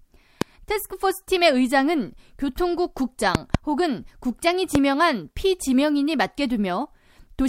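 Loud pops occur at 0.42 to 0.44 s, as a double pop between 3.35 and 3.57 s, and again at 4.75 to 4.78 s. Each is a sharp thump standing roughly 20 dB above the speech, which continues underneath. The likely cause is a sudden voltage step or pulse, such as a plug, switch, static discharge or driver glitch, entering the signal path, where the following circuitry shapes it into a brief transient.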